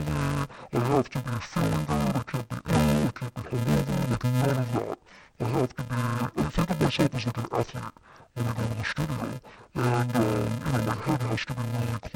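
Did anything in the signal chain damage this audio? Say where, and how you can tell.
Yes. Interleaved audio read as planar runs through the whole clip. It is a sample-format conversion fault: each channel is being de-interleaved incorrectly. The speech sounds dull and robotic, with a steady buzz at about 375 Hz and no clear octave drop. That buzz rate means blocks of about 2.67 ms, which fits a 128-sample block. Within each block, alternating left and right samples are split into first and second halves. Each half then plays at half speed, and the seams between blocks produce the buzz.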